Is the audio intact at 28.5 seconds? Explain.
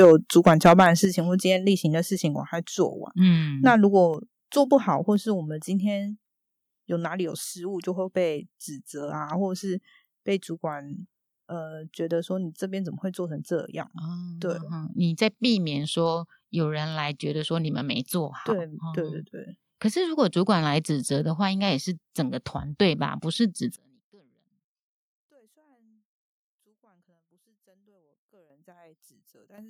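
No. From 23.76 s to the end, the mono sum drops by about 37 dB and the speech nearly vanishes, likely because one channel is inverted and cancels the other; the waveform shrinks to a thin trace. At 28.5 s, the microphone volume steps up by 11 dB as the software raises the input gain, so speech and background jump together in a sudden step in waveform height.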